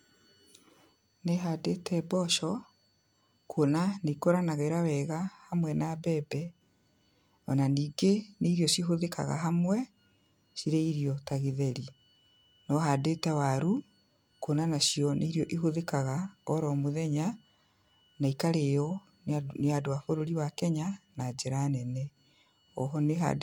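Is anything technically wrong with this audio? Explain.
No, nothing is technically wrong with this audio.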